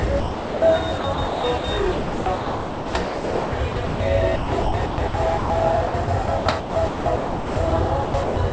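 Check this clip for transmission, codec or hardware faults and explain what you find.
Two faults show up, both pointing to the sender's voice detector misjudging the sound as background.

Sound dropped by the voice detector, 0.20 to 0.62 s: the detector likely classed the opening sound as background and stopped transmitting, so the receiver filled the gap with generated comfort noise. For about 420 ms the real sound disappears behind steady noise or near silence, then returns once the detector triggers again.

Sound chopped by the voice detector, at 0.98 to 1.64 s, 1.92 to 4.00 s, 4.36 to 5.50 s, 5.88 to 7.72 s and 8.04 to 8.36 s: the detector likely toggled repeatedly between sending and muting, with comfort noise inserted whenever it muted. This replaced about 320 ms, 1.58 s, 580 ms, 960 ms and 220 ms of sound in those stretches. The result is choppy audio, with quieter moments vanishing. 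Across the clip, the G.722 call path leaves nothing above 8 kHz.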